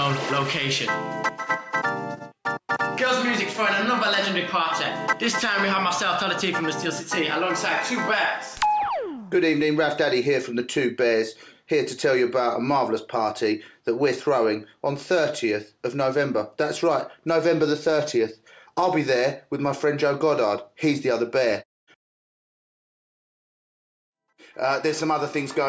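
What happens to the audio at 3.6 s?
Nothing goes wrong at 3.6 s; the audio plays through that moment intact, with no dropout, click or other fault.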